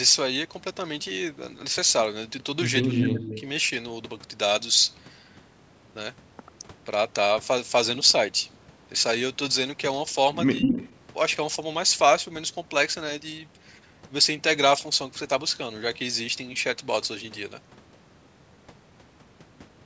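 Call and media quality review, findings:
Echo leak, 2.83–3.42 s and 10.58–10.94 s: delayed copy of the speech at 184 and 192 ms, a few dB under it, then about equal. Likely far-end echo canceller residue. Spectrogram shows duplicated harmonics offset in time.

Speech suppressed in double talk, 2.91–3.38 s and 10.6–10.8 s: talker ducks about 25 dB, then about 15 dB, while the echo overlaps. Likely the canceller attenuating both. The waveform shows notched envelope dips.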